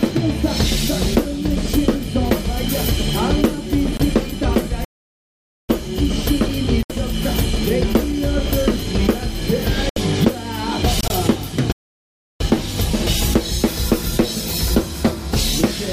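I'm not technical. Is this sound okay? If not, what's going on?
No, there are two kinds of faults. Corrupt frame muted: four very short gaps, at 3.97, 6.83, 9.89 and 11.01 s, each about a twentieth to a tenth of a second. Damaged chunks of the file were replaced with silence. The sound stays on time, so whatever fell in the gap is simply skipped.

Playback stall: two much longer silences, from 4.85 to 5.69 s and from 11.72 to 12.40 s (about 0.85 and 0.68 s). The player likely ran out of data and paused. After each pause, the sound then carries on.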